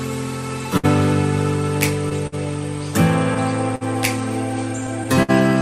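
Clock drift between sender and receiver runs through the whole clip: the sender's clock is running roughly 5 percent slow, so the jitter buffer keeps draining. On a waveform this shows as recurring small timing hiccups at uneven spacing rather than any steady pattern.

A short stall from a late packet occurs at 0.77, 2.27, 3.75 and 5.23 s. Each time the buffer runs empty and the last sound is stretched for about 54 to 61 ms before playback resumes where it left off, with nothing lost. Each stall is heard as a brief held sound with a faint buzz or dip. On a spectrogram it appears as a short band of frozen, horizontally smeared harmonics, and on the waveform as a repeated, slightly sagging stretch.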